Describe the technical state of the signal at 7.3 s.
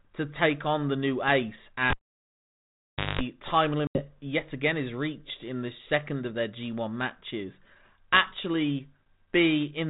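At 7.3 s the signal is intact, with no fault at that moment, and the speech passes through the 32 kbit/s G.726 ADPCM telephone coding with only its usual light effect on the sound.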